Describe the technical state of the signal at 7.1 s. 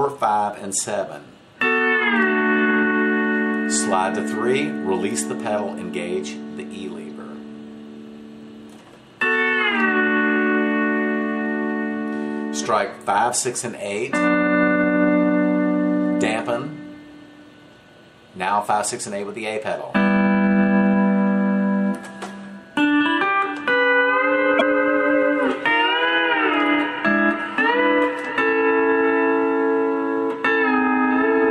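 A brief digital blip at 7.10 s comes from damaged data in a compressed stream: corrupted bytes there make the decoder misread frames and lose sync.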